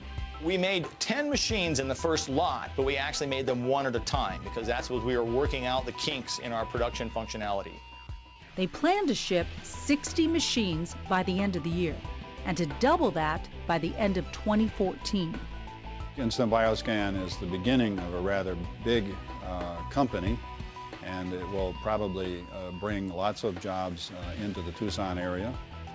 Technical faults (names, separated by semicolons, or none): none